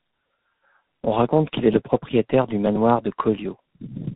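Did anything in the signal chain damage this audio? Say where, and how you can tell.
Yes: tandem speech coding, throughout, at the codec stage. The speech is rough, muffled and warbly with nothing above 3.8 kHz. That fits G.723.1 at 6.3 kbit/s being decoded, then recoded via G.711 A-law into G.726 at 32 kbit/s, each coder compounding earlier damage.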